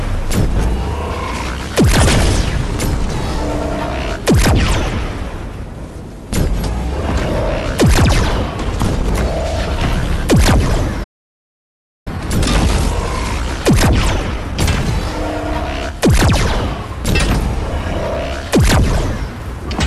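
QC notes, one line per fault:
11.03–12.08 s, playback stall: the audio halts in mid-flow and the output sits silent for about 1.0 s before resuming. The likely cause is the player running short of buffered data or having its output thread blocked, so nothing reaches the output until it recovers. Unlike a brief dropout or a codec glitch, this is a single long, clean hole, and the flow then picks up again rather than being patched over.
12.08–15.08 s, time-compressed catch-up: straight after the stall the audio runs hurried, at about 1.1 times normal speed, for 3 s before settling back. The player is working off the backlog the stall left behind by removing small slices and cross-fading the joins, which is why tempo rises while pitch stays put. A plain sample-rate speed-up would raise the pitch along with the tempo, and that does not happen here.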